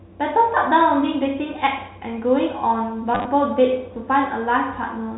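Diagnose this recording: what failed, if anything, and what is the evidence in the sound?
The network stage failed. Between 3.15 and 3.25 s there's a robotic stutter: packet loss with the last packet repeated. About 70 ms went missing across that 100 ms, in runs up to 30 ms. The buzz fits 10 ms packets. The G.711 telephone band around it is intact.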